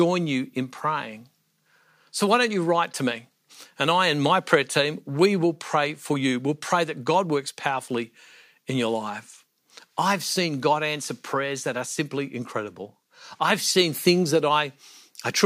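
Nothing goes wrong anywhere in this speech recording, so there's no technical fault to point to at any moment.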